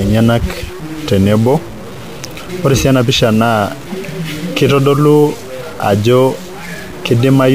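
Speech throughout, and the whole thing carries a harsh, buzzy distortion with noise filling the pauses, likely a stuck bit, a fairly high one worth roughly -25 dBFS.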